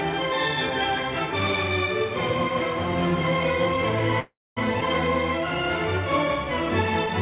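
A call audio freeze runs from 4.2 to 4.6 s. The last sound is stretched into a buzz or hiss that fades out, falling silent for about 0.23 s of the roughly 0.36 s gap, then the audio resumes where it stopped with nothing lost. The likely cause is delayed packets draining the jitter buffer.

A skip ahead follows at 4.80 to 4.84 s. Playback jumps forward with only a tiny join, dropping roughly 150 ms of audio so the two sides butt together almost directly. This happens when a stretch is discarded while later audio is already queued. Through both faults the band stops at 4 kHz, which fits a G.711 mu-law call codec.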